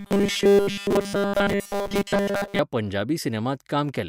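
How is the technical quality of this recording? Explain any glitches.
The recording has a clear technical fault in its first part. From 0.01 to 2.59 s the speech becomes a robotic sound from repeated short buffers: a rigid, metallic buzz at 200 Hz. This is likely caused by audio arriving too late, with playback looping essentially every 5 ms chunk in place of the skipped audio, so the speech only loosely tracks its original contour.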